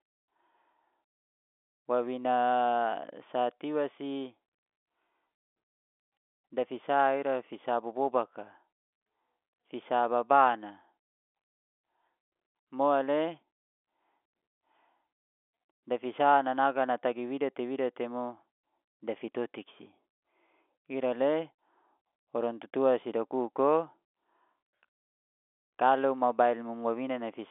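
Telephone-band speech over a G.711 mu-law line at 64 kbps, passing roughly 300 Hz to 3.5 kHz with nothing above about 3.8 kHz, and no faults to report.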